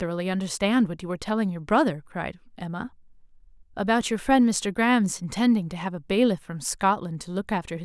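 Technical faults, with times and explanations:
Nothing in this speech recording stands out as a technical problem; it all sounds as it should.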